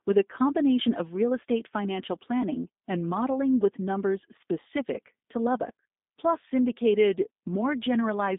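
Speech runs throughout through G.729 coding, a low-rate telephony codec whose roughness fits an 8 kbit/s stream. The line band is held to about 150 Hz to 3.7 kHz, and the pulse-based excitation model leaves plainly audible synthetic, slightly gritty artefacts.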